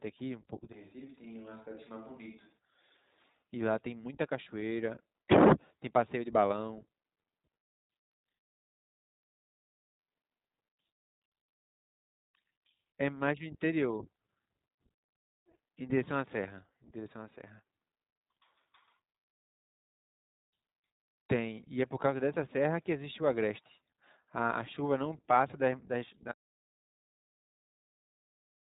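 From the start, the speech carries iLBC codec damage. Nothing above about 3.8 kHz passes, so it sounds narrowband and boxy. Each short frame is coded on its own, which fits 20 ms frames near 15 kbps. Voices come out rough and synthetic.

At 26.32 s comes an audio dropout to silence that lasts to the end. The sound cuts off mid-flow into silence, with no room tone at all. The input was likely lost while recording continued, writing silence in its place.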